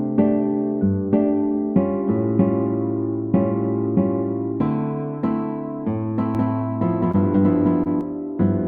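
A doubled audio track runs from 6.35 to 8.01 s, with an equally loud, uncoloured copy trailing roughly a fifth of a second behind, likely from a second, slower capture path, and starting and stopping abruptly. Short concealed packet loss strikes at 7.11–7.16 s and 7.84–7.87 s, where about 20 ms went missing each time and the receiver extended the preceding sound, leaving brief smears or wobbles.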